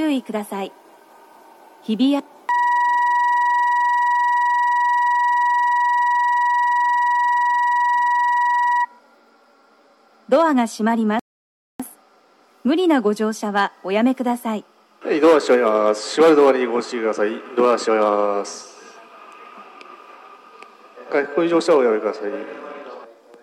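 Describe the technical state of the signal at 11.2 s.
At 11.19 s the player's buffer runs dry: playback has consumed all the audio downloaded so far, and it halts until more data arrives. This rebuffering stall lasts until 11.80 s, adding about 0.6 s of dead air. The sound drops abruptly to silence, then picks up at exactly the point where it broke off. No material is skipped or repeated; the only damage is the inserted gap in the flow of the audio.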